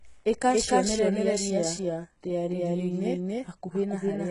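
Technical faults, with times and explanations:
Throughout, doubled audio track: a second, full-band copy of the speech runs about a third of a second behind and at about the same level, so every syllable is heard twice. Unlike an echo or room reflection, the late copy has no decay, no dulling and no room colour; it is simply the same sound again. The likely cause is the audio being captured twice, once through a slower path, or two out-of-step copies being mixed together.
Throughout, HE-AAC compression: the whole clip shows heavy codec damage, with nothing above 11.1 kHz, and the sound points to a very low bitrate, around 12 kbps. The treble is still present rather than simply cut off, which sets it apart from a plain low-pass or narrowband line. Instead, the sibilants come out gritty and metallic because the upper band was likely rebuilt by copying lower bands upward, so its harmonics no longer match those below the crossover.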